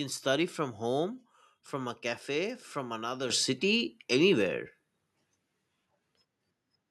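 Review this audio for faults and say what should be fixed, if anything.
Microphone volume stepped up at 3.3 s: the speech and the background noise behind it jump together by about 10 dB in a single step. The level rise lands on everything at once because the call software judged the microphone too quiet and raised the device's input volume directly, rather than applying a gradual gain inside the processing chain. To prevent it, disable automatic microphone level adjustment in the call software and set the input volume correctly beforehand.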